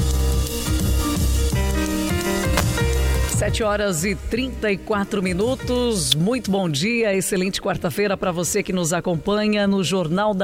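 At 2.57 to 2.60 s, a sharp snap cuts through the sound. It is an electrical switching spike, lasting under 30 ms. It peaks high, at about -5 dBFS. A second, shorter snap lands at 6.12 s, at a similar level. Both sit on top of the audio rather than replacing it. The likely cause is a nearby switch, motor or static discharge arcing, with the audio line picking up the burst.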